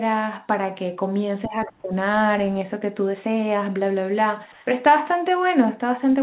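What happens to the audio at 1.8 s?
At 1.8 s you're in the middle of a stretch, from 1.47 to 1.91 s, where the speech sinks by about 25 dB. That's likely speech suppressed in double talk: the echo canceller mistook overlapping talk for echo and ducked it.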